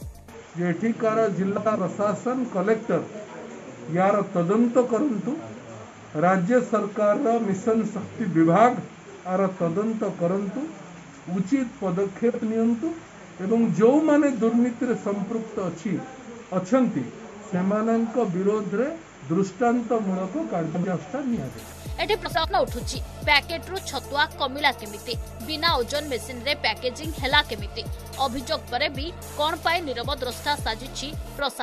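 Frames out of order garble the audio four times: 1.56 to 1.76 s, 12.29 to 12.40 s, 20.74 to 20.94 s, and 22.25 to 22.45 s. Two adjacent blocks, about 93 ms each (46 ms at 12.29 s), play swapped. This gives a brief flutter. Nothing is lost.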